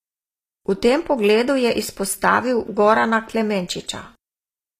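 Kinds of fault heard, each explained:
HE-AAC compression: Sibilants in this speech sound gritty and metallic, with a lispy edge, and the damage is plainly audible throughout. The likely cause is HE-AAC coding at a low rate, which fits around 24 kbps. Only the lower spectrum is coded directly, and the treble is synthesised by copying lower bands upward under a coarse envelope, so its harmonics fail to line up. Nothing is present above about 14.9 kHz.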